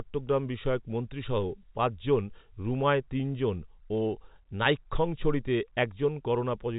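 No faults heard in the speech; the 4 kHz telephone band fits an ordinary 64 kbps G.711 A-law path doing its job.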